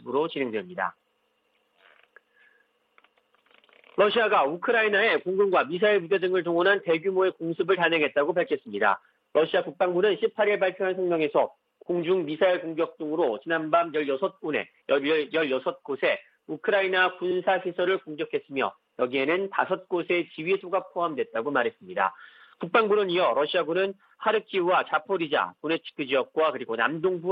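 A short run of compressed frames was written twice, a repeated-frames fault at 17.30 to 17.37 s. The decoder plays that 69.7 ms block once more, which fits about three frames, so the audio stutters there and runs 69.7 ms longer.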